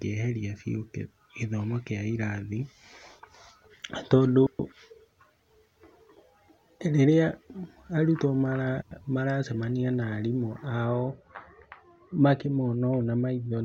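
At 4.47 to 4.72 s the speech briefly garbles into a flutter: frames out of order. Two adjacent runs of about 128 ms each were decoded in swapped sequence, so the second half of that stretch plays before the first. The same happens at 8.82 to 9.01 s with blocks of about 96 ms, just before "maracemania na arimũ". No time goes missing. On a spectrogram, formant tracks jump discontinuously at each join. The waveform envelope shows abrupt steps there.

From 10.84 s, right after "maracemania na arimũ", to the end of the clip, de-emphasis has been applied wrongly. A treble-cutting filter meant to reverse pre-emphasis acted on audio that didn't need it. It rolls the highs off smoothly, to about 13 dB down at 10 kHz relative to 1 kHz, so the speech turns dull and muffled, with sibilants softened. A spectrogram shows the upper bands fading progressively from that point. The waveform looks rounder, with sharp transients blunted.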